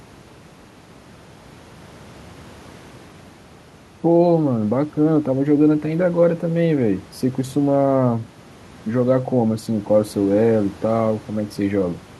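No technical faults occur in this recording; the faint room noise, about 27 dB below the speech, belongs to the room itself.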